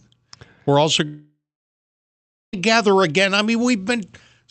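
From 1.05 s to 2.55 s the speech breaks off: the last sound smears into a fading buzz, then about 1.1 s of near-silence follows before speech resumes with roughly 1.5 s missing. This is likely a long network dropout, concealed over the 8 kHz-limited call audio.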